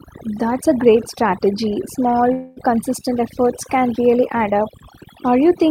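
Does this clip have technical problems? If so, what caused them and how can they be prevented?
Yes. Overdone noise removal runs through the whole speech clip. The noise reduction was set so aggressively that frequency bands sitting near its noise estimate are pulled down or switched off frame by frame, taking the quieter parts of the voice with them. The background drops and breaks up into twinkling specks. Prevent it by using gentler reduction settings with a floor that leaves some residual noise.

A call audio freeze sits between 2.33 and 2.59 s. For about 0.23 s the last sound is stretched out as a fading buzz or hiss rather than cut to silence, and then the speech resumes exactly where it left off, so a gap has been inserted without losing anything. The likely cause is packets held up in transit that let the jitter buffer run dry, adding roughly 232 ms of delay. Prevent it by giving the jitter buffer more headroom and prioritising voice traffic on the network.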